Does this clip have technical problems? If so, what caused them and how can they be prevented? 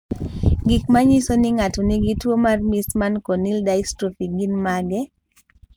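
No, nothing stood out as a technical problem on listening to this speech clip.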